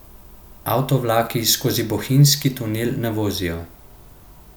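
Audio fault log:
1.75–1.83 s, wireless microphone noise hit: a brief swish of static as the FM radio link fades from cancelling reflections, letting receiver noise rise.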